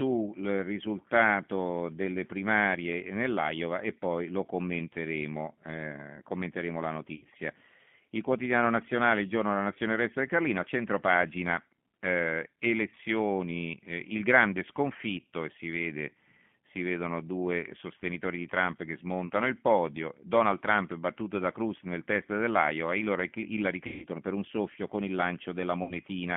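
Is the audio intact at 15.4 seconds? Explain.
No. The G.729 codec damage runs through the whole speech clip. The sound, rebuilt from a vocal tract model, points to 8 kbit/s. The band stops near 3.4 kHz. Speech sounds rough and synthetic.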